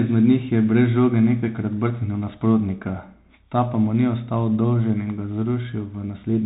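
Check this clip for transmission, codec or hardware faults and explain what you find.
The speech runs through a Bluetooth CVSD headset codec for its whole length, and the damage is plainly audible. CVSD codes each sample as a single up-or-down bit with an adaptive step, which fits a 64 kbps stream. Nothing passes above 3.8 kHz, so the sound is boxy and narrow. Loud bright sounds outrun the step and distort, s sounds turn scratchy, and a granular hiss sits beneath.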